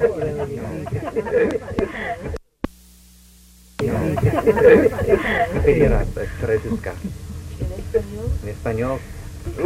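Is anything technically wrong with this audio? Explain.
Yes. At 1.3 s there is a brief chirp-like blip, a sharp burst of stray energy that rises to around -15 dBFS and sits at the wrong frequencies. This is a corrupt frame decoded: flipped bits inside a compressed frame led the decoder to misread gains or spectral codes and play the frame regardless, so energy landed in the wrong places. Its very short span points to roughly two damaged frames.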